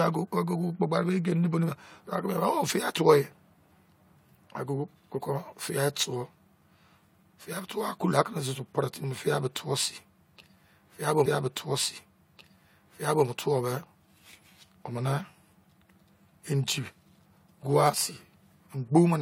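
A spoken-word recording in which, just after "fiai bo", a stretch of about two seconds plays a second time: from 11.25 s to 13.26 s the speech jumps back with a small blip and repeats what was just heard before carrying on. This is a stream segment repeated fault, where the player fetched or queued the same chunk of the stream twice, adding roughly 2.0 s to the running time.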